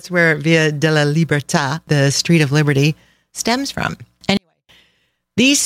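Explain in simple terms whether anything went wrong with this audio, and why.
Near the end, from 4.37 to 4.69 s, the speech suddenly goes almost silent but stays clean. This is a 24-bit alignment error: the audio was read with the wrong sample layout, which made it far quieter.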